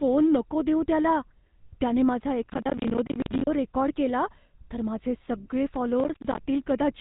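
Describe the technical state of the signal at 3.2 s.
At 3.2 s the speech sits inside a burst of processor overload crackle that runs from 2.43 to 3.47 s. The processor is falling behind on short audio buffers, around 10 ms each, and dozens of deadlines slip in quick succession. Each miss punches a hard-edged hole of silence into the signal, and the rapid string of holes is heard as gritty tearing riding on the speech. Packet-loss dropouts tend to be sparser and are often smoothed over. Here the gaps are tiny, dense and abrupt, and they stop cleanly when the load clears.

Underneath, the whole clip carries the GSM full-rate codec, which is plainly audible. Nothing gets through above about 3.8 kHz, and the voice has a buzzy, gravelly roughness from its pulse-driven excitation, which fits a 13 kbps GSM stream. Other narrowband codecs may sound muffled or watery. This roughness is coarse and rasping instead.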